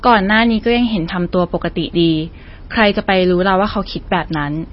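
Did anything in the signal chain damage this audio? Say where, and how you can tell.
Yes. Throughout, the sound is watery and swirly, with nothing above 5.6 kHz, likely from MP3 compression at a bitrate around 24 kbps. The swirling on top of a fixed treble cutoff sets it apart from plain filtering.

Hard clipping at a converter or gain stage flattens peaks from 0.06 to 0.76 s (about 3 dB over) and from 2.79 to 3.49 s (about 5 dB), adding crackly fuzz confined to those spans rather than present everywhere.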